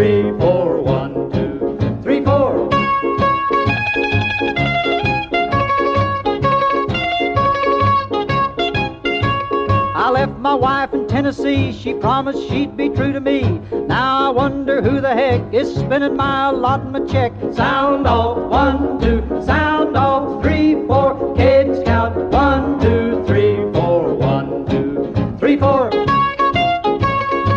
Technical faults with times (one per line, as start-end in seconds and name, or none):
none